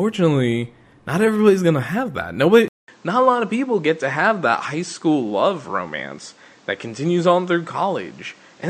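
At 2.68 s, right after "everybody's gonna have that", the speech drops out for 200 ms, then continues to the end with nothing above 8.7 kHz. The top of the band is missing and the tone turns duller. A new noise floor sits roughly 35 dB below the speech, and the level stays about the same. This pattern is likely an input switched to a poorer device partway through the recording.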